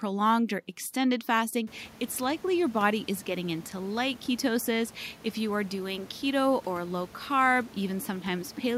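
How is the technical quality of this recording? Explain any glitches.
The recording has no technical glitches; the only thing of note is the room's own background noise, which rises by about 22 dB at around one and a half seconds and then sits about 25 dB below the speech.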